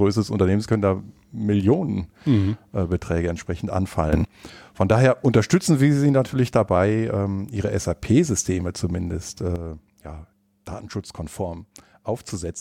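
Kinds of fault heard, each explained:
Sudden gain jump: Level steps abruptly, with speech and background noise moving together. It rises by about 13 dB from 4.13 to 4.25 s, just after "mhm äh entsprechend", then drops by about 8 dB from 9.56 s to the end, likely from gain changes applied without a ramp.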